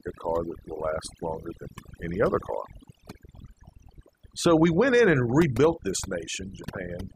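Overdone noise removal runs through the whole speech clip. A noise reduction stage was set too strong. It cuts individual frequency bands whenever they sit near its noise estimate. Quiet speech detail goes too. Pauses fall to near silence with twinkling specks.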